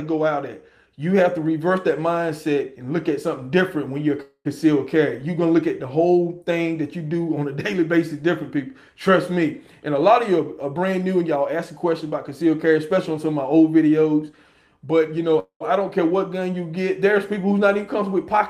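At 4.22 s the sound stalls for about 0.25 s in a call audio freeze. It holds on as a fading buzz or hiss and then drops into 60 ms of silence before resuming where it stopped. The likely cause is delayed packets draining the jitter buffer. On a spectrogram this shows as smeared, stretched bands thinning to a blank strip.

From 9.66 to 11.72 s a jitter buffer speed-up plays the audio at 110% speed with unchanged pitch. Roughly a fifth of a second of pitch-period slices is cut out to shrink the built-up delay, so it sounds hurried. The waveform keeps cycles of the same length, with short stretches cut out.

At 15.39 s a second freeze holds for about 0.23 s, with a 212 ms fading fill ending in 110 ms of flat silence.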